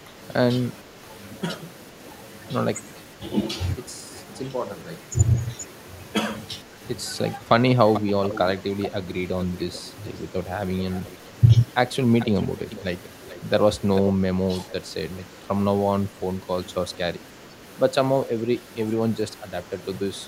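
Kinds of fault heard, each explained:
Speech suppressed in double talk: The voice briefly sinks by a few decibels, about 5 dB in most cases and nearer 10 dB at 14.4 s, in short dips of well under a tenth of a second around 3.2, 6.6, 14.4 and 17.5 s. This is likely an echo canceller meeting both ends talking at once, failing to tell this talker from the returning loudspeaker sound, and briefly turning everything down.
Echo leak: A faint, delayed copy of the voice trails the original by 440 ms, longest from about 7.9 to 10.1 s. Shorter scraps follow near 11 s, 12.2 to 13.4 s and 14.0 s, and they range from well below the speech to only about 10 dB under it. The likely cause is a loudspeaker at the far end whose echo canceller let part of its own microphone pickup slip back down the line.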